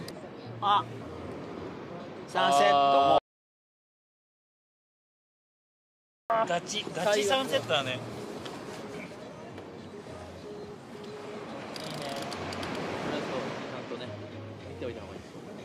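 At 3.18 s the sound cuts off abruptly into silence, with no room tone underneath, and returns at 6.30 s mid-flow: an audio dropout to silence lasting about 3.1 s. The input was likely lost while the recorder kept writing silence, so that material is gone.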